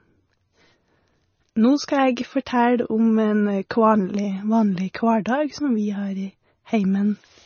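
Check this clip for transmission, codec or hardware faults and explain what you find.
One fault runs through the whole clip. MP3 compression, throughout: at a bitrate that fits roughly 25 kbps, the encoder likely cuts everything above 6.6 kHz and flickers weak lines, leaving the speech dull and watery.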